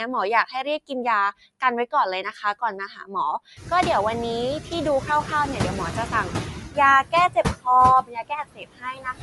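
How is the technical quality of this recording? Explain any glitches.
The recording is compromised by three processing faults.

Noise suppressor artifacts run throughout. The suppressor pulls steady noise down by about 15 dB between words, so the residue pumps instead of holding even like plain hiss, which is most noticeable once the room noise rises around 3.5 s.

The speech has a grainy, breathy edge with nothing above 11.6 kHz, most likely from Bluetooth LC3 compression. Unlike suppressor pumping, this graininess rides on the voice itself, which fits a 48 kbps stream in 10 ms frames.

Speech cut by the noise suppressor occurs from 7.34 to 7.66 s, with parts dipping by up to about 19 dB for roughly a tenth of a second. It recurs from 8.03 s to the end, dropping as much as about 20 dB for well over half a second. Those fragments sound swallowed, unlike the steady graininess from the codec.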